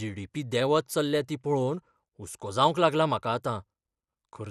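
Throughout the speech, the sound is dull, with nothing above about 14.4 kHz, and a gurgling, granular roughness flickers across the upper range. The likely cause is MP2 compression at a rate that fits roughly 80 kbps, too few bits to keep every sub-band switched on and finely quantised.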